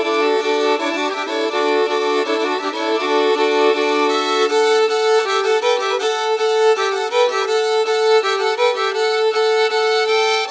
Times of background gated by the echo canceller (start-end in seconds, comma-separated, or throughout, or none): none